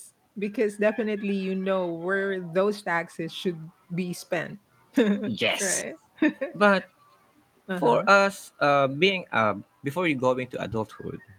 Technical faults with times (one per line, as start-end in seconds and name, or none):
none